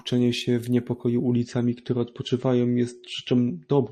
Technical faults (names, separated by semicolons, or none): adaptive stream at a lower bitrate